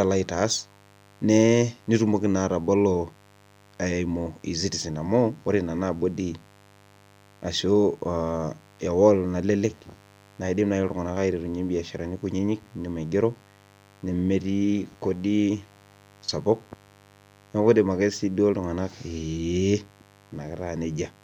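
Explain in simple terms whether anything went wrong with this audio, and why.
Mains buzz runs under the speech for the whole clip, quiet but steady and raspy. Electrical interference from the 50 Hz power supply, likely from a dimmer, rectifier or unshielded cable, leaks sharp spikes into the signal twice per cycle, building a harsh hum.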